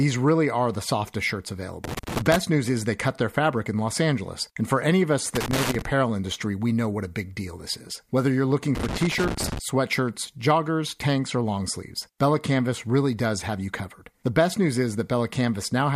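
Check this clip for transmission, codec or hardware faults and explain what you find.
Three bursts of loose connector crackle interrupt the speech, at 1.84 to 2.36 s, 5.35 to 5.82 s and 8.75 to 9.59 s. Each time, a worn or dirty contact in the cable path makes and loses contact in rapid succession, chopping the signal into fragments and adding pops wherever DC on the line jumps. The result is ragged, irregular scratching. Unlike evenly spaced digital clicks from buffer underruns, these bursts have no steady rhythm and vary in length.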